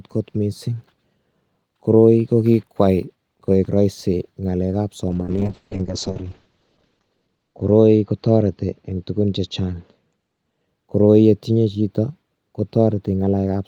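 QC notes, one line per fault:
5.11–10.73 s, call bitrate drop: the voice turns coarse, watery and muffled as the encoder is starved of bits, which fits a fall from around 32 kbps to roughly 7 kbps. At the low point, held for about 1.9 s, the codec discards everything above 8 kHz to save data, down from a 20 kHz band. On a spectrogram the upper band goes dark in a flat shelf at 8 kHz, with smeared, blotchy harmonics below, until the bitrate recovers.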